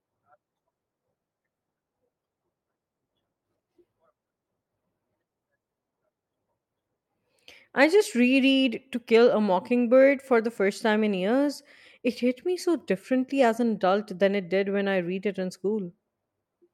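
Listening to this speech recording, nothing stood out as a technical problem at any point.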